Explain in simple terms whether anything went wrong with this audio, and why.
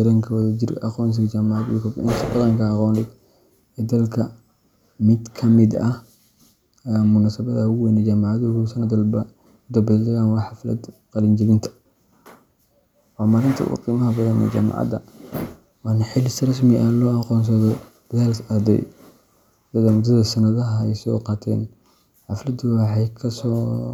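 At 0.42 s the speech stalls for an instant, a tiny freeze of less than a thousandth of a second, with little or no click. This is an underrun with held sample: the playback system briefly ran out of audio to send, so it held the last value steady until fresh sound arrived. Because nothing was lost and the speech picked up where it paused, the restart is gentle.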